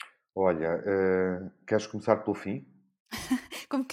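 No technical faults are audible.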